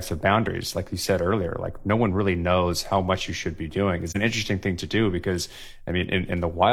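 Speech, with one AAC frame loss with muting at 4.08 to 4.17 s: a brief dip of about 43 ms, consistent with a single lost frame whose spectrum the decoder zeroed. Overlapping windows fade it out and back in, so its edges are soft, unlike a hard dropout.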